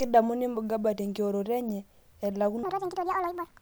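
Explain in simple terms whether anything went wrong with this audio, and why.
Something went wrong near the end: from 2.63 s to 3.61 s there is a section at the wrong speed. The likely cause is that this last stretch was played back against the wrong clock, running it 1.74 times faster than it was recorded. Because speed and pitch are tied together, the speech there suddenly sounds rushed and squeaky, jumping up by roughly ten semitones, close to an octave higher than before.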